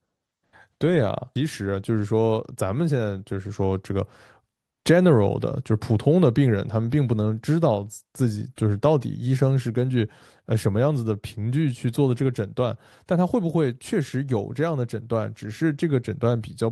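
Speech with a jitter buffer speed-up from 1.45 to 2.54 s: the receiver, holding more audio than its target, cut short pitch-period slices repeatedly, removing about a tenth of a second, so the speech runs at 109% speed without any pitch change and sounds hurried.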